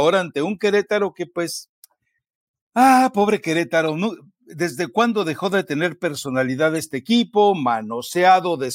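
At 3.87–3.89 s after "ah pobre" and 6.76–6.79 s after "dejó de tener personalidad", a corrupt frame decoded produces brief glitches near -20 dBFS, consistent with a few damaged frames being played anyway.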